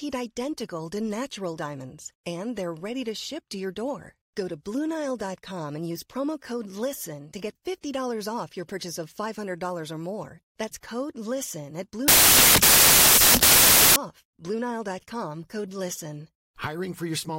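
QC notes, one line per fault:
12.08–13.96 s, samples built from the wrong bytes: the speech gives way to loud broadband hiss for nearly two seconds, because each sample's bytes are assembled wrongly and the noisy low bits become the large part of every value. The spectrogram shows a flat, dense wash across all frequencies, and the waveform jumps to a much larger amplitude.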